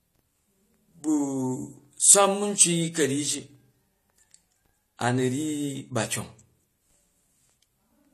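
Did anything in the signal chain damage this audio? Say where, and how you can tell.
Yes. The damage sits at the codec stage and runs through the whole speech clip. Nothing reaches above 14 kHz, and two different kinds of lossy artefact sit on top of each other. This is likely transcoding between lossy codecs: a low-rate HE-AAC encode, around 32 kbit/s, later re-encoded as AAC-LC near 48 kbit/s. The second encoder spends its bits reproducing the first one's artefacts and adds its own, while the lowest cut-off in the chain stays.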